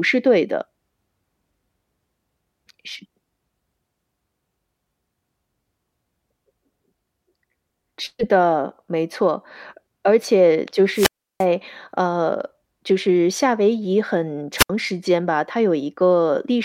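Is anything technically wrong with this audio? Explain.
Yes, there are two wireless microphone squelch dropouts, at 10.92 to 11.46 s (0.34 s mute) and 14.57 to 14.70 s (0.07 s mute). In each, the fading FM signal causes a brief surge of hiss before the receiver's squelch cuts to near silence. That preceding hiss distinguishes it from a clean digital dropout.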